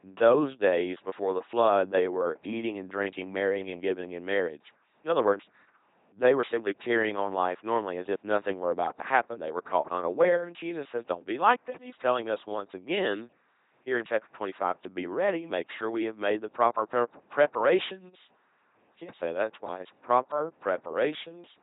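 A buzzing, mechanical robot quality runs through this whole speech recording. Every stretch sounds either as a flat pulse-driven drone or as pure hiss, with stray buzzes or hiss where that choice goes wrong. Nothing is heard above about 3.9 kHz. This is the sound of an LPC-10 vocoder, heavily degraded, at 2.4 kbit/s. It rebuilds speech from a short all-pole filter excited by either a pulse train or noise, discarding the natural waveform.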